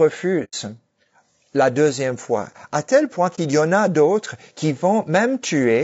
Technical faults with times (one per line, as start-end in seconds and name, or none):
0.00-5.84 low-delay AAC compression
0.44-0.54 AAC frame loss with muting
3.35-3.38 AAC frame loss with muting